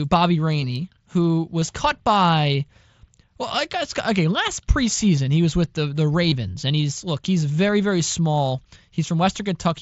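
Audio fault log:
1.61, 3.48, 5.16, 6.30, 7.68 and 8.95 s, concealed Bluetooth headset packet loss: brief smears of repeated waveform, 7.5 to 15 ms each, as the receiver patches dropped packets with recent audio.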